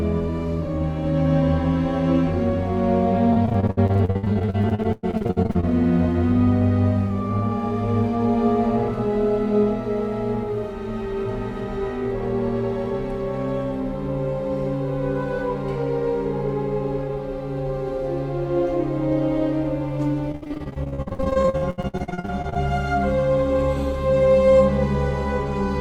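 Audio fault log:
3.33–5.65 s: repeated packet loss (robotic sound). Over these 2.3 seconds the stream keeps dropping short pieces, the longest about 106 ms. Each hole is filled by stretching the sound just before it, so about 41% of the stretch, nearly a second, is synthetic continuation. The fills recur too closely for the ear to recover between them, giving a choppy, robotic texture with pieces missing.
20.32–22.57 s: repeated packet loss (robotic sound). The same pattern returns for 2.3 seconds, with many brief gaps of up to about 73 ms. Concealment covers about 46% of the span, just over a second. The holes again follow one another closely, giving a choppy, robotic, stuttering quality with pieces missing.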